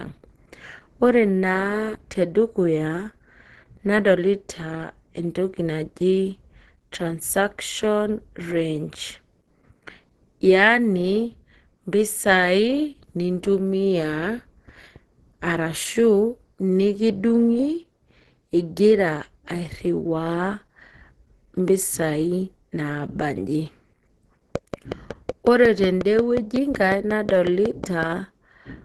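The whole speech clip sounds muffled and hoarse, with nothing above 12.1 kHz, which points to Opus compression, likely in hybrid mode at around 16 kbps. From 24.56 to 28.04 s there's a train of clicks: about twenty evenly spaced pops at roughly 5.5 per second, standing out well above the speech, likely from electrical interference or a faulty connection.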